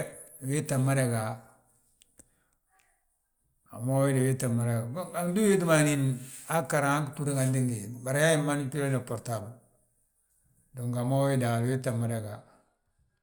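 No technical faults can be heard anywhere in the recording; the signal stays intact and continuous throughout.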